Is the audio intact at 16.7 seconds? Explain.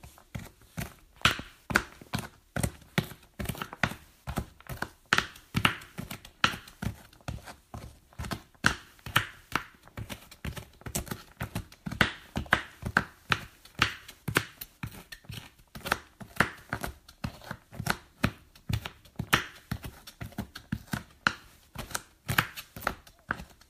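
Yes, the sound at 16.7 seconds plays through intact, with no dropout, glitch or other fault at that moment.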